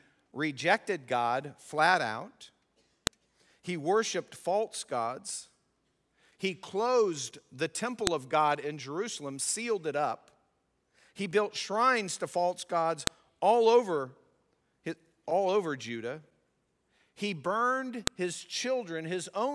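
Speech, interrupted by four sharp, loud clicks at 3.07, 8.07, 13.07 and 18.07 s, spaced exactly 5 s apart regardless of what the talker is doing. This is a file header played as audio: the stream was assembled from 5-second WAV pieces whose header bytes were left in and decoded as samples. On a waveform each appears as a brief spike about 1 ms long; on a spectrogram, as a thin vertical line spanning all frequencies.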